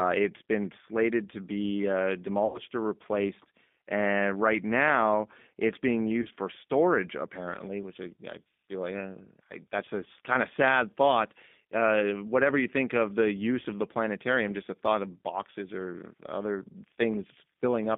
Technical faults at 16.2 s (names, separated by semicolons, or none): G.729 codec